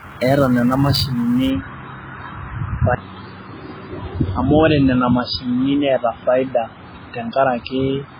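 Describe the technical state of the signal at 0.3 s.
At 0.3 s the speech sounds watery and swirly, with no content above 5 kHz and a smeared, dull top end. The likely cause is heavy MP3 compression that cuts the treble and drops weak frequency lines frame by frame, which fits a stream of about 16 kbps.

Over the same moment, within the stretch from 0.0 to 1.5 s, a rough hiss rides on the louder and brighter parts of the speech. This is sample clock jitter: the converter's clock wanders by something like 10 microseconds, so samples land early or late. The resulting error grows on steep parts of the waveform and sits roughly 25 dB below the signal.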